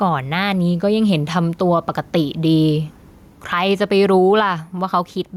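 All the way through the speech there's gain pumping: the gain swings by roughly ten decibels whenever something loud arrives. It's likely a fast limiter clamping down on an input that's been driven far too hot, so everything sounds squashed and flat.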